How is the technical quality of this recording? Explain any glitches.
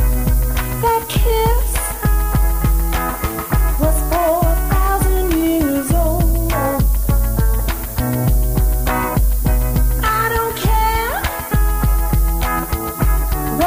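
The recording is heavily degraded by low bit depth with noise shaping across its whole length. The audio sounds like it was reduced to about 5 bits, with the rounding error pushed upward in frequency. The result is a steady, thin hiss, only around 10 dB below the signal, that climbs sharply toward the top of the band.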